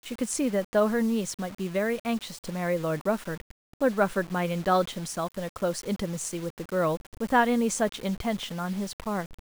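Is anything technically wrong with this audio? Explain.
Yes. Throughout the speech, low bit depth without dither is likely at work: samples were rounded to only a few levels, which fits a 6-bit word. The error tracks the signal at roughly 20 dB below it, so quiet syllables turn gritty, sputter or drop out.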